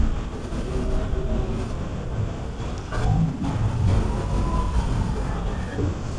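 Throughout, a wrong sample rate makes the speech run at half speed and an octave low. Unlike time-stretching, pitch and tempo fall together, which fits 44.1 kHz audio played near 22 kHz.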